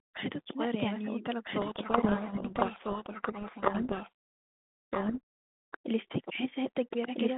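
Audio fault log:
Throughout: doubled audio track. A second full-band copy of the speech runs about one and a half seconds behind, at roughly the same level. It has no decay or room colour, just a clean repeat. The likely cause is a slower second capture path feeding the same mix.
1.6 to 5.18 s: codec payload misread. The speech is buried under harsh, rasping distortion. The receiver reads the G.726 code words in the wrong bit order, so each sample gets a wrong correction. Outside this span, the 32 kbit/s G.726 line carries speech with light codec damage within about 150 Hz to 3.6 kHz.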